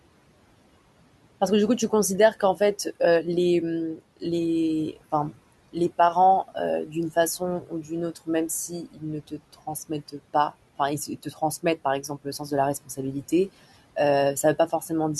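Speech, with speech cut by the noise suppressor at 3.96–4.23 s, 6.48–8.28 s, 8.68–10.15 s, 11.07–11.64 s, 12.02–13.32 s and 14.43–14.91 s. Inside each span, short stretches of roughly a tenth to a few tenths of a second are pushed down by about 9 to 18 dB. The suppressor mistook quiet consonants and word endings for the background, so they sound swallowed or faint. On a spectrogram these show as abrupt holes in the speech energy, sinking toward the room noise floor about 21 dB below the speech. The waveform shows sharp dips in the envelope at the same moments.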